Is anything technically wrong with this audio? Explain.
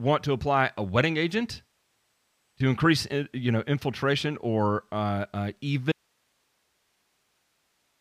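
Yes. At 5.92 s the speech cuts out abruptly in an audio dropout to a faint residue, and it does not return before the clip ends. The gap holds only hiss, sitting roughly 45 dB below the speech level. The likely cause is a loss of the source feed while the downstream path stayed live, so the remaining noise floor carries on after the signal stops. The cut is instantaneous, not a pause or fade.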